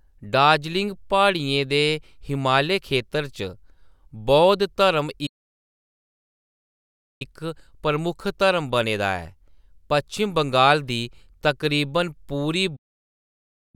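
At 5.26 s the speech cuts to silence for about 1.94 s, resuming at 7.22 s. This is a playback stall. The player likely ran short of data, so output stopped mid-flow. A second stall begins at 12.76 s, after "बंगाल दी तकरीबन पूरी", and silences the last 0.98 s.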